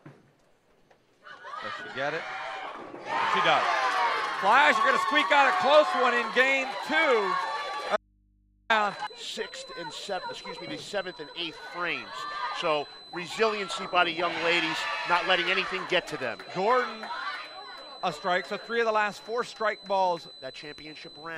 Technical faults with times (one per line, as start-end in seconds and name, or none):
7.96-8.70 audio dropout to a faint residue